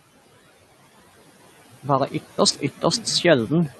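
A noise suppressor runs across the whole of this speech recording, pulling down every band it judges to be steady noise by about 13 dB from frame to frame. The room's background noise, which sits roughly 19 dB under the speech, therefore dips in the pauses and swells back up beneath the talking. At 2.18 s the input most likely switched to a poorer device, and the change holds to the end of the clip. A silence of about 200 ms marks the switch. After it the voice turns duller and boxier. The level shifts by a few decibels, and a very faint new noise floor arrives with the other device.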